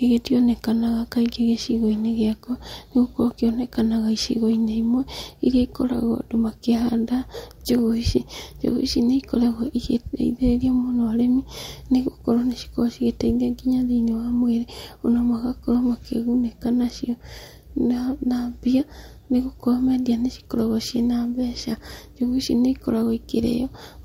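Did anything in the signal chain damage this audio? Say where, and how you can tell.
No, there's nothing in this speech recording that points to damage anywhere along the chain, so it can be taken as it is.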